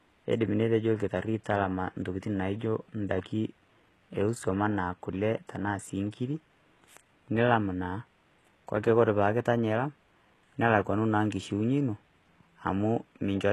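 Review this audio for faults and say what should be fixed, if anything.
HE-AAC compression, throughout: heavily damaged, gritty treble stopping at 12.3 kHz, likely spectral band replication copying lower bands upward at a bitrate near 16 kbps.

Encode the speech at a higher bitrate or with a full-band codec so the treble is coded directly rather than rebuilt.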